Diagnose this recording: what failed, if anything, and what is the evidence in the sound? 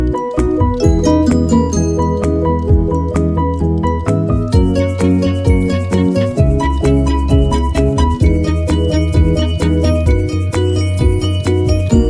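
No fault found in this recording.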